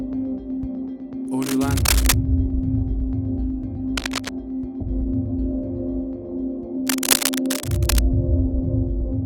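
Cable scratch noise appears three times, from 1.42 to 2.14 s, from 3.97 to 4.30 s, and from 6.87 to 7.99 s, each a dense, uneven burst of scratching and rustling laid over the audio. The likely cause is a worn cable, connector or control being moved, so its contact resistance jumps about rapidly. The first and last bursts sit at roughly the level of the sound itself, and the short middle one is a little quieter.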